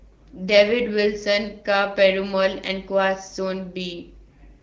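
Nothing goes wrong anywhere in the speech, which comes across the way AMR wideband (HD Voice) at 12.65 kbit/s normally sounds, carrying only the light coding character expected at that rate.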